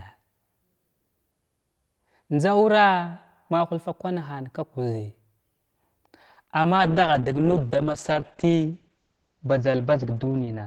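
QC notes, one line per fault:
6.33 to 6.38 s, short stall from a late packet: a packet arrived after it was due, so the jitter buffer ran dry and the receiver stretched the last bit of speech for about 30 ms until it turned up. Playback then resumed from the same point, so nothing is lost, but the sound is held slightly too long. Everything after this point plays about 30 ms later than before.
6.44 to 6.48 s and 6.62 to 6.66 s, short concealed packet loss: twice in quick succession, about 20 ms of audio never reached the decoder in time. Each gap was patched by extending the preceding sound, following its pitch where it was voiced and using shaped noise where it was not, then crossfading back into the real signal. Each patch is a brief smear or wobble.
6.78 s to the end, call bitrate drop: the call's bandwidth estimate fell and the encoder was told to spend far fewer bits, which fits a drop from around 32 kbps to about 8 kbps. 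Speech is coded much more coarsely from here and sounds rough and watery. The top end is also cut at about 8 kHz, so sibilants lose their edge and the speech turns muffled. No recovery occurs before the clip ends.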